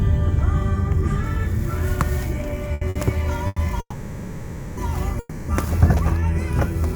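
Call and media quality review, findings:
Short stall from a late packet at 2.73–2.83 s, 2.89–2.97 s and 3.47–3.58 s. Jitter buffer underrun: receiver held the last sound 80, 60 and 90 ms until the packet arrived, then resumed in place. Faint buzz, nothing lost, playout delay grows.

Call audio freeze at 3.80–4.79 s and 5.19–5.50 s. Sound stretches into a fading buzz for 970 and 290 ms, ending in 60 and 10 ms of silence, then resumes where it stopped. Likely packets held in transit emptying the jitter buffer. No content lost, delay added.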